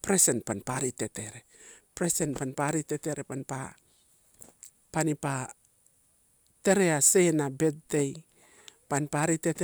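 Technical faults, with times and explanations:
No technical faults can be heard in this speech.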